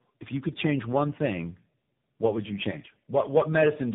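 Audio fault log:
throughout, tandem speech coding: the call passed through three different low-rate speech codecs in a row, consistent with an ADPCM stage, an iLBC-type stage and a final AMR-NB-type stage, each decoding and re-encoding the previous one's already damaged output. The errors compound, so the speech sounds rougher, more muffled and more warbly than one codec alone would leave it, and the telephone-band ceiling removes everything above 3.8 kHz.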